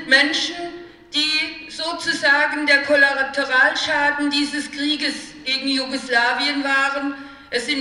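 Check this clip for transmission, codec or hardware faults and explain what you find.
Nothing stood out on listening.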